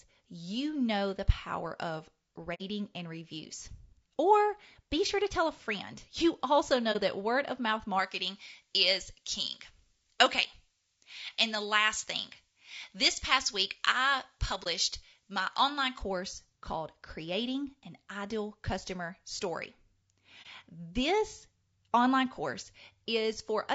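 A speech recording carrying audible low-delay AAC compression throughout: rough, grainy voicing with noise between harmonics, which likely points to AAC-ELD at around 32 kbps. AAC frame loss with muting leaves muted dropouts at 2.54–2.62 s (between "know the power of" and "and reviews"), 6.92–6.96 s (just before "that word of mouth"), 14.63–14.67 s and 20.42–20.47 s, consistent with two frames, then single frames, zeroed. From 7.99 to 15.99 s, following "that word of mouth", pre-emphasis left on lifts treble about 11 dB at 10 kHz relative to 1 kHz, matching a J.17 curve without de-emphasis, making the sound thin and sibilant.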